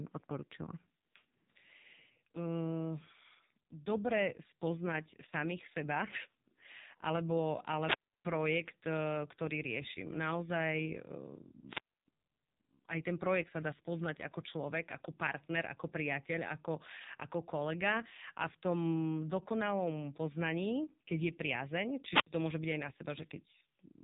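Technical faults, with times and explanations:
Throughout, AMR narrowband mobile codec: the speech was squeezed through the mobile codec at one of its lowest modes, with a buzziness that fits about 5.9 kbps. The 8 kHz sampling leaves nothing above about 3.8 kHz, so the sound is muffled and boxy. So few bits are left to drive the vocal-tract model with pulses that it rebuilds the speech coarsely, leaving heavy damage that sounds buzzy, rasping and synthetic.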